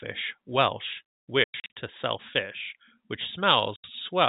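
Packet loss filled with silence strikes between 1.44 and 1.74 s, where about 220 ms of audio drops out in scattered gaps across a 320 ms stretch, the longest run 100 ms, and again from 3.76 to 3.84 s as one 80 ms hole. Whole packets never arrived and the receiver substituted digital silence, so the speech cuts out abruptly with hard edges. The gap lengths fit 20 ms packets, consistent with a G.711 telephone stream whose narrowband sound stays intact.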